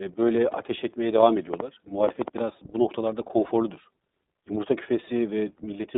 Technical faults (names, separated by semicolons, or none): iLBC codec; lost iLBC frames; train of clicks